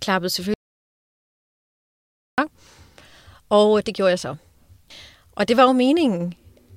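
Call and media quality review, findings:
Audio dropout to silence, 0.54–2.38 s: speech cuts off mid-flow, about 1.84 s lost. Gap is silent with no room tone, unlike noise-gate or comfort-noise gaps. Likely cause: input device or link lost, with the recorder writing silence.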